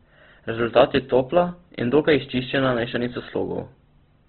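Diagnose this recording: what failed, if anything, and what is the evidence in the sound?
The codec stage: throughout the speech, nothing reaches above 4.2 kHz, and the tone is rough and grainy, which points to a very low bitrate, around 12 kbps. This is likely Opus compression, with band energies kept but detail noise-filled. A spectrogram shows a hard ceiling and smeared, speckled harmonics.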